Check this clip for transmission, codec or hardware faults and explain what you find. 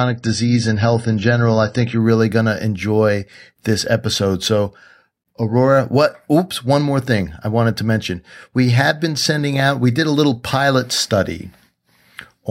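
The clip has one fault, an adaptive stream starting at a low bitrate. From 0.0 to 2.0 s nothing sounds above 10 kHz and codec artefacts are heavier, fitting low-bitrate AAC. Once the player has gauged the connection it steps up, and quality improves abruptly, without a gap, before "really going to enjoy".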